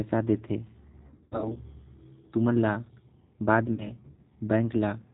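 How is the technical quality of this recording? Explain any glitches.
The recording has low-bitrate codec damage throughout and two stretches of dropout concealment.

G.729 codec, throughout: the speech is rebuilt from a vocal-tract filter, a pitch predictor and a few pulses per frame, which fits an 8 kbit/s G.729A stream. Nothing above 4 kHz comes through, so the voice sounds muffled, rough and plainly synthetic.

VoIP packet loss concealed by the speech codec, 1.06 to 1.58 s and 3.74 to 3.96 s: when packets went missing, the decoder extended its last pitch and filter at falling gain. In the first stretch about 260 ms is lost in scattered gaps of up to 80 ms, giving buzzy or noisy, fading smears. The second, about 40 ms, is a brief blur, and the voice stays weak for a moment afterwards.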